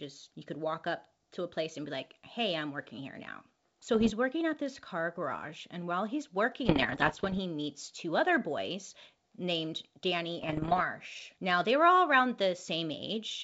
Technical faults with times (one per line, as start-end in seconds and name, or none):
3.94-4.11 bit errors on an ADPCM link
6.66-7.39 bit errors on an ADPCM link
10.41-10.83 bit errors on an ADPCM link